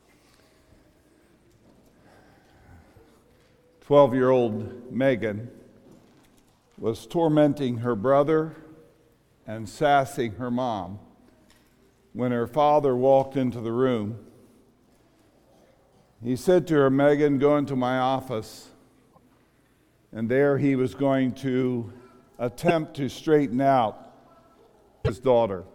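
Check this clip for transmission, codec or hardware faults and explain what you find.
One kind of fault is present: damaged data in a compressed stream, at 11.51–11.53 s, 19.08–19.18 s, 22.68–22.71 s and 25.01–25.10 s. Corrupted bytes cause the decoder to misread frames and resynchronise, each heard as a brief chirp or blip.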